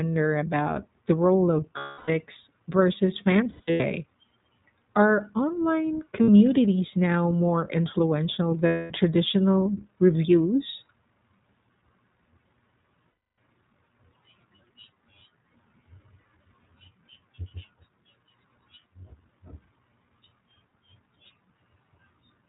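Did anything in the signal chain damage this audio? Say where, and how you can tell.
Yes. The iLBC codec, at the codec stage, runs throughout: nothing above 4 kHz and a rough, synthetic texture, consistent with its 15.2 kbps mode and 20 ms frames.

Lost iLBC frames, a network fault, occur at 1.78–2.10 s after "about the role of", 3.44–3.85 s in short scattered gaps, 6.22–6.29 s after "are online", 8.66–8.93 s between "now more influential" and "traditional reviews", and 13.10–13.38 s. Each gap is a held, buzzy repeated pitch cycle, and the sound recovers at once.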